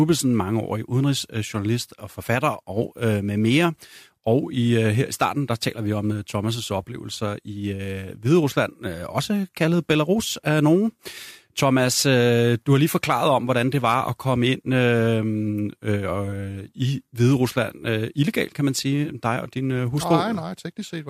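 No technical faults can be heard.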